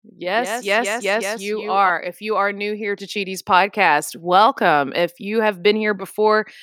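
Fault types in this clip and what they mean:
Doubled audio track: right from the start of this speech clip there's a second, full-band copy trailing the first by about 150 ms and sitting around 5 dB lower. It's dry, with no decay or room sound, so it reads as a hard slapback rather than an echo. The likely cause is the signal reaching the mix twice, once through a slower path. The copy cuts out abruptly at 1.9 s.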